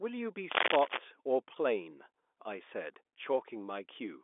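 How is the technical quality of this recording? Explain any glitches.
The recording has one clear glitch near the start, and it is a burst of cable scratch noise. The speech comes through a G.711 telephone line, so it is confined to the narrow phone band with nothing above about 3.7 kHz.

From 0.51 to 0.98 s, a rough, uneven scratching runs over the speech. It rises louder than the speech itself, by roughly 5 dB. The likely cause is a worn cable or connector being moved. Its contact resistance jumps rapidly, and that injects dense, irregular bursts of noise for about half a second.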